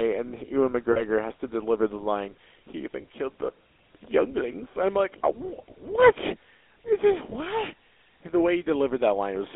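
The whole clip carries the sound of the GSM full-rate codec, consistent with a 13 kbps stream. This early phone codec models the vocal tract and drives it with a thin, regular pulse train that keeps only part of the excitation. The speech has a buzzy, gravelly roughness. The damage is plainly audible. The band is also narrowed to about 300 Hz to 3.5 kHz, so nothing bright survives above that.

Lost GSM frames break in three times. The first runs from 0.92 to 1.03 s, just before "has to deliver the". About 40 ms is missing there, which fits two dropped frames. The second spans 3.02 to 3.04 s, between "the line he even" and "killed the younglings I'm". The third falls from 7.30 to 7.34 s. Each of those is about 20 ms, pointing to one frame. In each gap the decoder reuses the last good frame. The sound holds as a brief, rough metallic ring.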